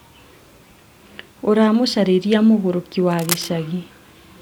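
Right around 3.11 s, running to 3.5 s, there's a patch of cable scratch noise laid over the speech. You get a dense, ragged burst of scratching and rustling for a bit under half a second, sitting roughly 10 dB below the speech. The likely culprit is a worn cable or connector being shifted, making the contact resistance jump around rapidly and spray uneven noise into the signal.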